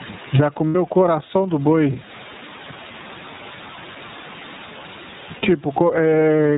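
Gain pumping runs throughout, likely from input gain set far too high with a fast limiter pulling it down. The room background sits about 34 dB under the speech, and the gain swings by around 20 dB.

The iLBC codec also runs throughout, in its 30 ms frame mode. It cuts everything above 4 kHz, leaving dull, narrowband speech with a plainly rough, synthetic edge.

Lost iLBC frames appear from 0.69 to 0.76 s and from 5.36 to 5.44 s. Each 60 ms gap, consistent with two missing frames, is filled with a repeated, slightly buzzy pitch cycle before the voice snaps back.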